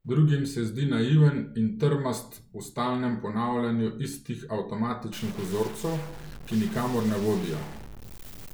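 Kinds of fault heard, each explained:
Stuck bit: a single data bit likely held at a fixed value, so samples where it should differ are pushed off by that bit's weight, a step of roughly -40 dBFS. From 5.13 s to the end the speech turns harsh and buzzy, and pauses fill with steady noise.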